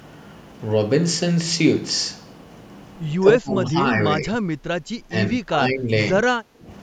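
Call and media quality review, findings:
Speech suppressed in double talk, 3.2–3.78, 4.19–4.61, 5.09–5.9, 6.26–6.36 and 6.52–6.68 s: speech dips by about 15 to 20 dB in chunks. Likely echo canceller misreading near-end talk as loudspeaker echo during overlap and attenuating both.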